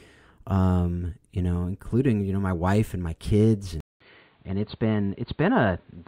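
At 3.80 s, right after "wife and my kids", the speech drops out for 200 ms, then returns duller and boxier, with nothing above 4.6 kHz, a level drop of about 5 dB and a faint new background roughly 40 dB down. This is likely an input switched to a poorer device.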